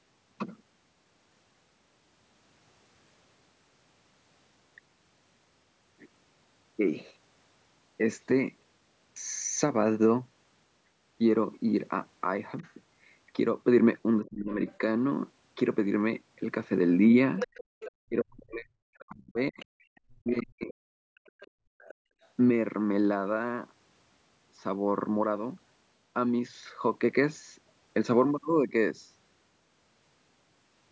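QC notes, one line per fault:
12.58–12.73 s, other side's voice leaking through: a faint second voice, about 35 dB under the talker, likely loudspeaker echo the canceller left behind.
14.21–14.6 s, speech suppressed in double talk: the talker's voice drops by roughly 30 dB for about 0.4 s, likely because the canceller ducked both sides while they overlapped.
14.68–14.78 s, other side's voice leaking through: a brief scrap of a second voice, around 30 dB below the talker, likely residual echo from the loudspeaker.
17.37–17.92 s, other side's voice leaking through: a much stronger second voice, only about 10 dB under the talker, likely echo the canceller failed to remove.
17.64–17.77 s, background gated by the echo canceller: room sound falls away by about 35 dB for roughly 150 ms, then returns once the canceller releases its hold on the microphone.
18.05–20.73 s, speech suppressed in double talk: the talker's voice dips and breaks up, up to roughly 40 dB down for about 2 s in total, likely from the canceller suppressing overlapping talk.
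19.59–22.28 s, other side's voice leaking through: a second voice runs underneath at about 25 dB below the talker, likely uncancelled loudspeaker echo.
21.01–22.21 s, background gated by the echo canceller: room sound is pulled down by about 37 dB for around 1 s while the loudspeaker plays, returning once the canceller lets go.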